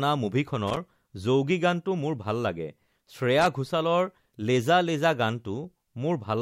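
At 0.67 to 0.77 s and again at 3.39 to 3.47 s the speech breaks into short, irregular bursts of loose connector crackle, scratchy, as a worn contact repeatedly makes and breaks, chopping the signal.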